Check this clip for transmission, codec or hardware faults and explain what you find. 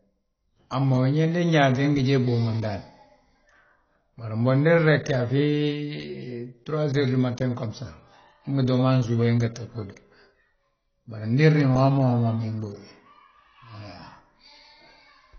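One codec fault is audible across the whole speech clip: AAC compression. Nothing is present above 6.6 kHz, so sibilants lose their edge and the voice sounds dull. The damage is plainly audible, with a warbling, fizzy texture on sustained sounds. The likely cause is AAC-LC at a very low bitrate, around 24 kbps. At that rate the encoder drops the top band and quantises the remaining frequency lines so coarsely that gaps and substitute noise smear the detail.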